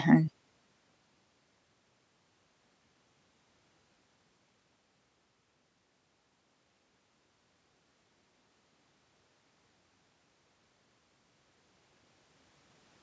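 No technical faults are audible.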